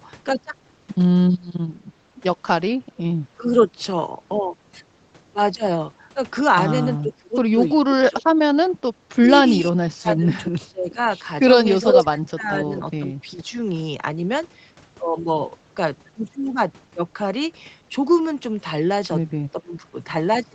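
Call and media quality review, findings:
Speech suppressed in double talk at 3.39–3.71 s, 7.02–10.98 s, 11.84–13.55 s and 19.52–19.95 s. Speech dips or drops out in pieces, deepest about 35 dB near 7–11 s. Likely cause: echo canceller mistaking local talk for loudspeaker echo and attenuating both.

Echo leak at 11.86–12.48 s, overlapping the third dip. Delayed copy of the played voice returns about 425 ms late, level within roughly 5 dB of the speech. Probably the echo canceller on the loudspeaker side left residual loudspeaker pickup in its microphone signal and sent it back.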